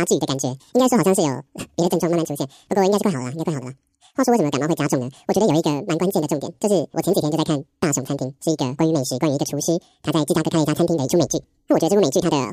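From start to finish, the speech plays at double speed. The fault is audio read two samples at a time. The reader treats each pair of samples as a single frame, as if the data held two channels or samples twice as wide. Half the samples go to the wrong place, so time is squeezed by a factor of 2. Pitch rises 12 semitones, a full octave.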